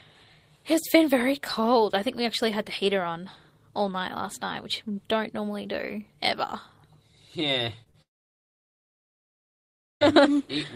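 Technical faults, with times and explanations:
7.83–7.88 s and 7.90–7.96 s, short concealed packet loss: about 20 ms, then 40 ms, went missing, and the decoder extended the preceding sound, leaving brief smears.
8.02–10.14 s, long network dropout: about two seconds of audio vanishes into near-silence, likely because packets stopped arriving. The sound resumes later with that stretch lost.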